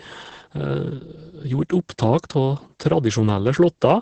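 Throughout, Opus voice compression in its SILK mode leaves nothing above about 8.5 kHz and codes the excitation coarsely, pointing to roughly 10 kbps: muffled, hoarse, slightly robotic speech, unlike a plain low-pass filter.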